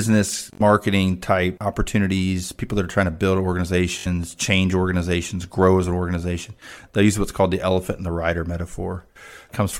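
Bluetooth stutter breaks the speech twice. From 0.53 to 0.61 s, just before "type opportunities people that", a short slice repeats in a rapid buzz. Late or lost packets left the receiver replaying its last buffer. About 64 ms of audio is gone, which fits three missing frames. At 3.99 to 4.07 s, after "are trying to build", the same stutter returns. Speech resumes at "change organizations grow as" as though it had played on.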